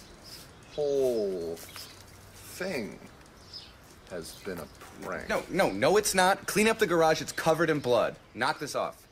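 No technical faults can be heard anywhere in the audio.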